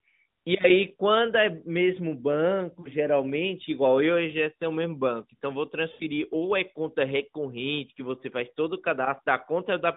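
Lost AMR speech frames at 2.80–2.89 s and 5.92–6.03 s: the decoder repeats its last good frame with falling gain, so speech warbles and fades across gaps that fit two and four missing 20 ms frames.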